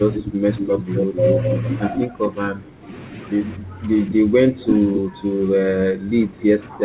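From 0.06 to 1.6 s a delayed copy of the speech trails the original by about 250 ms, only around 5 dB quieter. This is an echo leak, likely from a far-end loudspeaker whose echo canceller let part of the microphone pickup through. It returns as a short scrap at 1.95–2.01 s and again at 4.64–5.0 s, each time at a steady delay near 255–265 ms. That fixed lag, and the fact that it adds a second copy rather than removing anything, separates it from the dips described below. Like the rest of the clip, the echo stops at 4 kHz, which fits a G.711 narrowband call path.

Overlapping that first echo, from 0.2 to 1.37 s, the main speech drops by up to around 10 dB in pieces adding up to about 0.7 s. This is speech suppressed in double talk, likely because the canceller could not separate the talker from the returning echo and turned both down. It hits harder at 1.98–2.91 s, with dips of roughly 15 dB, and from 3.57 s to the end with drops near 10 dB. 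Unlike the echo, nothing is added. The voice just sinks or gaps while the other side is active.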